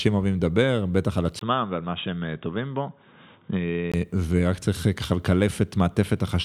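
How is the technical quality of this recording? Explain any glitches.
The recording has one clear glitch. From 1.39 to 3.94 s, after a 20 ms gap, the speech turns dull and a little quieter, with nothing above 3.8 kHz. This is likely an input switched to a poorer device. A simple filter would not also bring the drop of about 5 dB or the faint new background noise that arrive with it. The fuller sound returns at 3.94 s.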